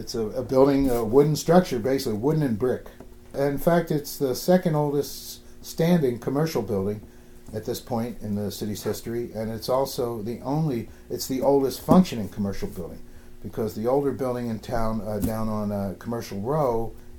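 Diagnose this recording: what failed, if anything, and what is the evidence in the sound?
Nothing stood out on listening, and no stage of the chain showed evidence of a failure.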